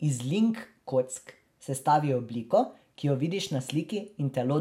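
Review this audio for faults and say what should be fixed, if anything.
DAB burbling occurs from 0.57 to 0.69 s and again from 3.40 to 3.59 s, heard as burbling over the speech. Weak reception let bit errors, a small fraction of a percent, slip past the error correction into the MP2 data. Corrupted samples put short blips of noise in single sub-bands, and corrupted scale factors make sub-bands leap in level for up to a frame. Improving the antenna or signal strength and re-recording would prevent it.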